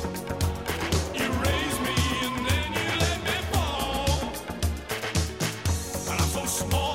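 A drift correction step runs from 3.76 to 4.90 s: the audio slows by about 6% and drops 106 cents, roughly a semitone, then snaps back. It's likely a clock-matching resampler stepping its rate. On a spectrogram, every partial shifts down for that stretch.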